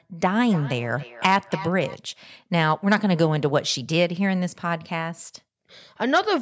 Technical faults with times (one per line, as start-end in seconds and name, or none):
0.40-2.02 feedback echo between two devices